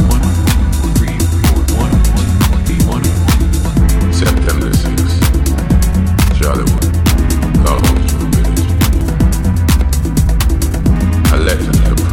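There are six abrupt jumps in the sound, at 2.69, 6.78, 7.80, 9.01, 10.40 and 10.96 s. Each one is the audio suddenly skipping ahead with no gap of silence. Most of the skips lose about a tenth of a second, but 7.80 s loses roughly twice that and 10.40 s roughly three times. The likely cause is a dropped buffer (overrun), where the capture side wasn't read in time and the loss of whole chunks spliced the edges together.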